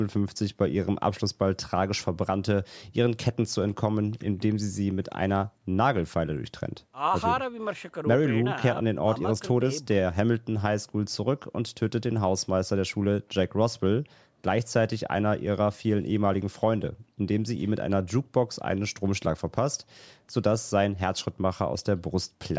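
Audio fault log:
No faults are present in this speech clip. The call microphone processing can be heard in the trimmed lowest bass and in the absence of content above 8 kHz, both normal for that path.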